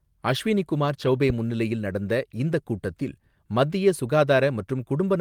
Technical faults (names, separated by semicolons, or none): lost packet rebuilt from error correction